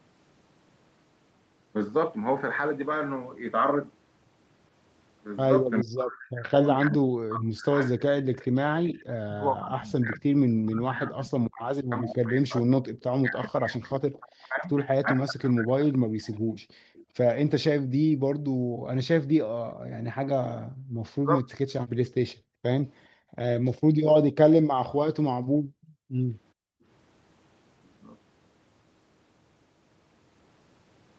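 A speech recording in which the echo canceller likely mistook overlapping talk for echo, producing speech suppressed in double talk: from 5.82 to 15.97 s, and again from 20.93 to 21.48 s, the voice dips by as much as about 40 dB and breaks up. That is about seven seconds in total in the first stretch. From 16.33 to 17.03 s, an echo leak, likely from incompletely cancelled loudspeaker pickup, returns a faint copy of the voice about 0.42 s late, roughly 30 dB down. The background is gated by the echo canceller from 16.62 to 20.65 s, 21.96 to 23.31 s and 25.42 to 26.84 s, with the room sound briefly dropping by about 36 to 38 dB before returning.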